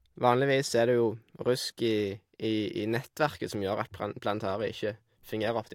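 No technical faults can be heard anywhere in this speech recording. There is nothing in it that calls for a timestamp or a repair.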